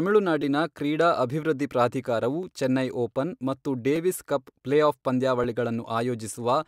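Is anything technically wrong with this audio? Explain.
Yes, there are two repeated-buffer faults in this speech. At 0.42 s, just before "ಕ್ರೀಡಾ ಅಭಿವೃದ್ಧಿ ಪ್ರಾಧಿಕಾರವು ಚೆನ್ನೈ", a 5.8 ms slice plays three times in a row. At 2.43 s, between "ಕ್ರೀಡಾ ಅಭಿವೃದ್ಧಿ ಪ್ರಾಧಿಕಾರವು" and "ಚೆನ್ನೈ ಓಪನ್ ಮತ್ತು", a slice of the same length plays twice. The playback device ran out of fresh data and resent its last buffer, which fits a 256-sample buffer. Because the slices are so short and joined abruptly, each event sounds like a brief click or buzz rather than an audible stutter.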